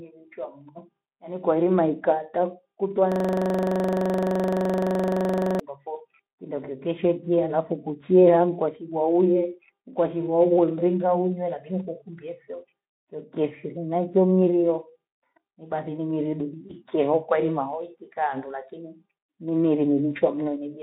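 Speech clip, carried over a narrowband Speex link at about 15 kbps (the 200 Hz to 3.7 kHz line band is audible). From 3.12 to 5.60 s there's a system hang loop. The machine or its audio driver stalled while the sound hardware kept replaying the same stretch of its ring buffer. So one 42.67 ms slice repeats 58 times, a rapid rattle at about 23.4 Hz, which fits a 2048-sample buffer. Then at 16.67 to 16.73 s you get VoIP packet loss concealed by the speech codec. A 20 ms gap, probably a single lost frame, gets filled by the decoder stretching its last pitch and filter state into a brief smear with dropping gain. The voice sounds weak for a moment after real packets resume, because the decoder's memory has to rebuild.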